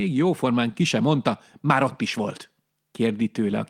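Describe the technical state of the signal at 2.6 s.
At 2.6 s the speech signal is intact, with no dropout, distortion, glitch or other fault audible at that moment.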